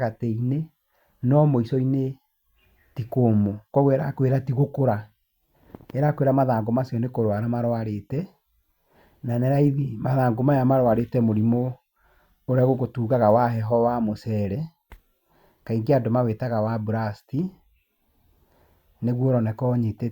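Nothing in this bit of speech points to a technical fault at any moment, so there's nothing to pin down here.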